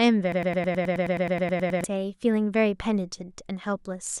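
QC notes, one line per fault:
0.32–1.84 s, broken-record loop: a short slice of speech, about 0.11 s long, repeats exactly and back to back 14 times, giving a stuttering, machine-gun chatter with no forward progress until normal speech resumes at 1.84 s. The likely cause is a stall in the player, encoder or stream that kept re-sending the last fragment it held, so the speech due in those 1.5 seconds never plays and is lost.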